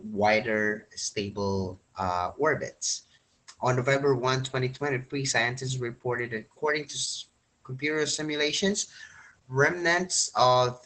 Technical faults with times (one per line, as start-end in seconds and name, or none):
0.00-10.85 Opus voice compression